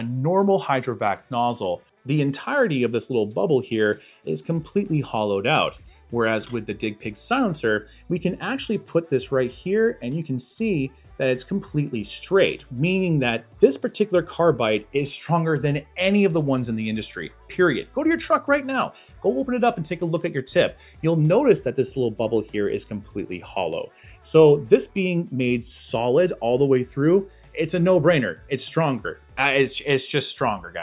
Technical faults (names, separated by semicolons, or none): none